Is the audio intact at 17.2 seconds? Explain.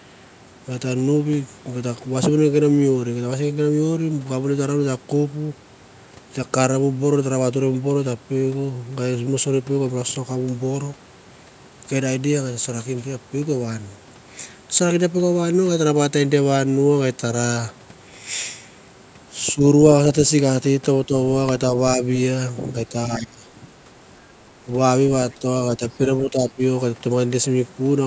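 Yes, the speech at 17.2 seconds is intact, having passed through normal call microphone processing with nothing above 8 kHz and no fault at that moment.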